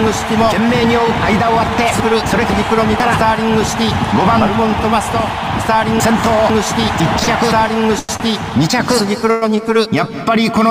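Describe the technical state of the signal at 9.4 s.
At 9.4 s a call audio freeze (9.31–9.57 s) holds the last sound as a fading buzz, likely from stalled packets, showing as a flat smeared band before resuming unchanged.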